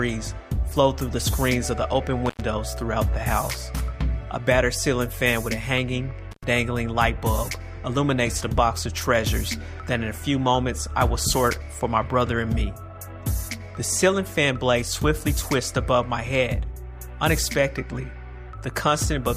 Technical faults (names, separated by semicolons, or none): intermittent contact